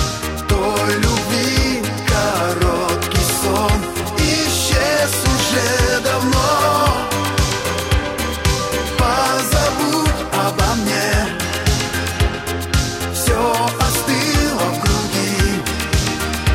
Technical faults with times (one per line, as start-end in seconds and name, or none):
14.58 dropped buffer (overrun)